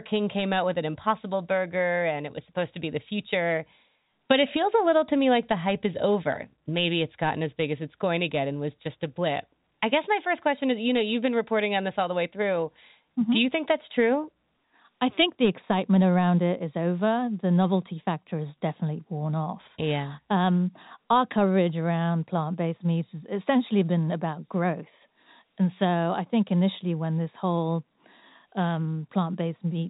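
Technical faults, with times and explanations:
No technical faults are present; the speech carries the narrow telephone band of G.711 A-law coding, with nothing above about 3.8 kHz and at most a faint level-following quantisation hiss.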